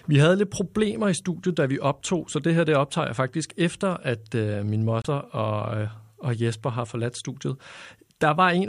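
At 5.02 s, between "øh min" and "og øh og", the speech cuts to silence for about 28 ms and resumes around 5.07 s. This is likely a Bluetooth stall: delayed packets let the receiver's buffer empty, so playback halted until retransmitted audio arrived.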